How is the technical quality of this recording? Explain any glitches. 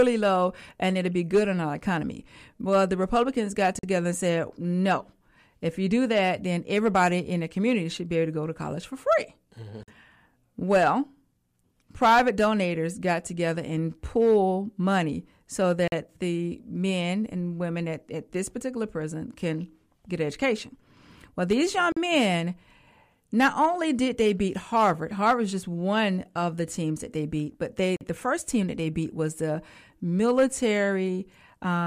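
The recording has one recurring fault: a gap between chunks, heard five times at 3.79–3.83 s, 9.83–9.88 s, 15.88–15.92 s, 21.92–21.97 s and 27.97–28.01 s. The speech was delivered in 6-second blocks, and each join has 44 ms of silence inserted. Nothing is removed; the following block simply starts late. Each gap is a short, hard-edged dropout that briefly chops the speech and recurs at a steady interval of just over 6 seconds.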